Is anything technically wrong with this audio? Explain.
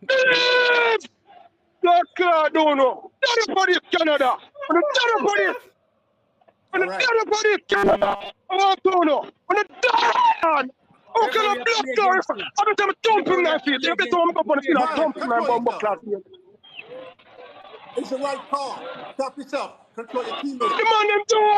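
Yes, there are two kinds of fault.

Gaps between stream segments occur at 5.66 s and from 9.67 to 9.70 s. The time stamps of consecutive 4 s segments don't meet, so the player inserts silence, about 5.5 ms and 25.5 ms. On the waveform these are flat, hard-edged dropouts; on a spectrogram they are thin vertical blank stripes. No audio is lost.

Robotic sound from repeated short buffers runs from 7.70 to 8.32 s. A rigid 200 Hz metallic buzz replaces the natural texture. The likely cause is late-arriving audio being covered by looping a 5 ms buffer, with most of the real sound skipped. A spectrogram shows evenly spaced horizontal harmonic lines at multiples of 200 Hz; the waveform repeats through roughly 70% of the span.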